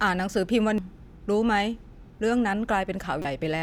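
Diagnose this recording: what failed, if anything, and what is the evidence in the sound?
The codec stage is where it went wrong: there's damaged data in the compressed stream. You get a tiny blip right at 0.78 s, then a longer glitch from about 3.22 to 3.25 s in the speech. Some of the compressed bytes were corrupted, so the decoder couldn't parse those frames properly. It lost sync and hunted for the next valid frame header, and what you hear is the garbage it produced while getting its bearings again.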